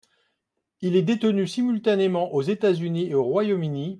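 Nothing in the recording stood out as a technical problem on listening.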